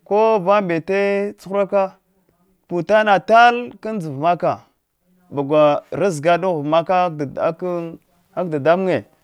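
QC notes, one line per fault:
No faults heard in this speech recording.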